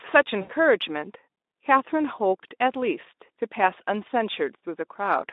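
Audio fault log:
0.41–0.52 s, VoIP packet loss concealed by the speech codec: about 80 ms of audio went missing, which fits four lost 20 ms frames, and the Speex decoder filled the gap by repeating its last pitch and filter shape at falling gain, giving a brief buzzy or noisy smear. On a spectrogram, steady flat harmonic lines within the narrow 250 Hz to 3.7 kHz band replace normal formant movement. The waveform shows a repetitive, decaying envelope.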